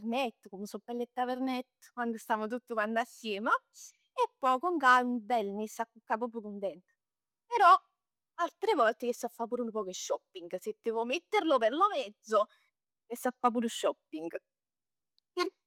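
No technical faults can be heard in the speech.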